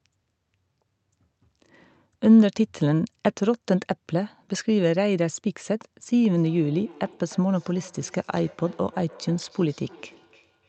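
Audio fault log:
6.37–10.69 s feedback echo between two devices: speech returns about every third of a second, thin and ringing, peaking about 26 dB below the direct sound. A second device in the room replays the call, and the first device's microphone picks it up again, unseen by that device's echo canceller.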